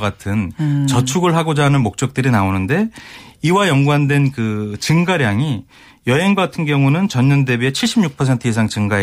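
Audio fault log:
No faults can be heard in this speech recording. There is nothing to log.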